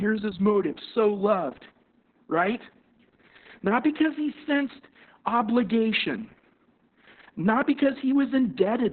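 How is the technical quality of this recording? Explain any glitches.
The recording quality is poor throughout. Heavy Opus voice compression colours the whole clip from start to finish. The speech is boxed into a narrow telephone-like band with nothing above about 4.3 kHz, so it sounds muffled and dull. The codec is running its SILK speech model, which rebuilds the voice from a coarse pitch-and-filter sketch. At a rate this starved, that leaves the voice hoarse and faintly robotic, which fits a bitrate somewhere around 6 kbps.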